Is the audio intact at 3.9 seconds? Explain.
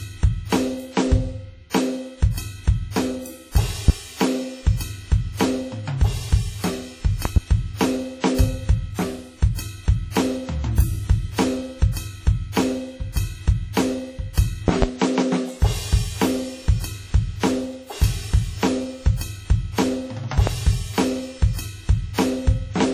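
No. From 3.88 to 3.92 s a single loud pop sits on top of the music, standing roughly 20 dB above it, while the music carries on underneath. It sounds like a sudden voltage step or pulse, likely from a plug, switch, static discharge or driver glitch, shaped by the circuits that follow. On a waveform it shows as one tall, narrow spike; on a spectrogram, a thin bright vertical line running across the frequency range.

The same moment also carries the WMA compression damage present throughout, which is heavy here. The sound is washy and ringing, with hiss that swells and fades with the music, consistent with a transform codec spreading quantisation noise over long blocks and dropping weak components, likely at a low bitrate around 32 kbps. A spectrogram shows nothing above 16.6 kHz, smeared transients and patchy holes where quieter detail has been zeroed.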